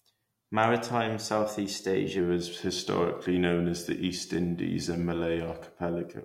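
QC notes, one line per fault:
2.19–6.24 s, wrong sample rate: from 2.19 s the speech plays back slower than it was captured, with no rate conversion, so speed and pitch fall together. It runs at 0.919 times normal speed and about 1.47 semitones low, which fits 48 kHz audio played at 44.1 kHz.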